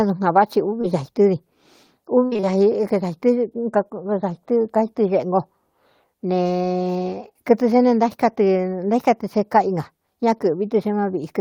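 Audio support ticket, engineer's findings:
Short concealed packet loss at 0.81–0.85 s: brief smear or wobble in the speech. About 20 ms never arrived. The jitter buffer/decoder concealment extended the preceding sound, then cross-faded back. On a spectrogram, harmonics or noise are stretched flat across the hole, with a soft seam. A short consonant here may be lost.

Repeated packet loss (robotic sound) from 2.25 to 2.52 s: choppy speech with pieces missing. There are four gaps, the longest 59 ms, about 120 ms missing in total, and about 58% of the stretch is concealed. Probable component: the network path feeding the receiver's jitter buffer, with the decoder patching each hole by continuing the last pitch before the next loss hits. On a spectrogram this appears as repeated frozen harmonic blocks with smeared edges. The waveform shows periodic copied cycles and dips.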